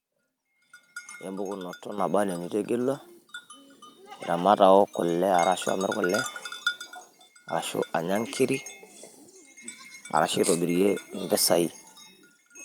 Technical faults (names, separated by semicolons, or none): microphone volume stepped up